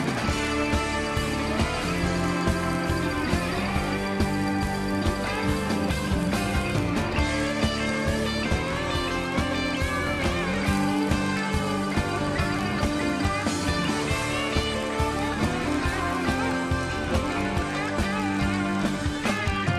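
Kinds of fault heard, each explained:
Filter restarted on every block: the filter drops its memory at each block boundary and starts again from silence, so every block opens with a tiny transient. Here that's a steady buzz at about 46.9 Hz that tracks the level, which fits a 1024-sample block.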